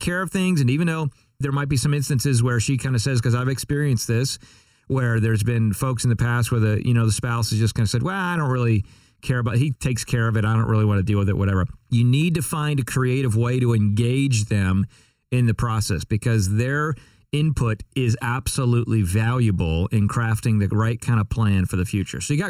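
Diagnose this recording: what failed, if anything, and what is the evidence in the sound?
The speech has channel delay (comb filtering) the whole way through, about 22 seconds. It sounds hollow and phasey, with a fixed dip in the low mids around 700 Hz and more dips repeating up the band. One channel is running roughly 0.7 ms late, a few dozen samples, which points to a driver or buffer misalignment between channels. When the two get summed to mono, the shared content cancels at evenly spaced notches.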